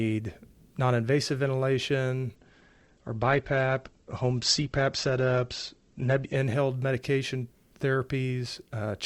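Right after "non invasive ventilation", at 2.36 s, the speech suddenly turns dull, with nothing above 8.2 kHz and a watery, smeared texture in the remaining highs. There is no gap at either edge. Full brightness snaps back at 6.36 s. This is an adaptive stream at a lower bitrate: the player switched to a leaner encoding for four seconds, which fits a step down from Opus at 64 kbit/s to 16 kbit/s.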